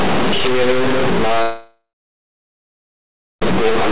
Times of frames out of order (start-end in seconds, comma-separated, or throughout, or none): none